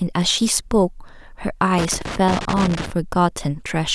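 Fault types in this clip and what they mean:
Loose connector crackle: a worn or dirty contact in the signal path repeatedly breaks and remakes the connection as it shifts, chopping the speech and adding pops where any DC on the line jumps. Here it sounds as an irregular burst of scratchy crackle from about 1.78 to 2.92 s. On a waveform the signal shows ragged dropouts and sharp spikes. A spectrogram shows scattered broadband vertical streaks cutting through the speech harmonics across that stretch.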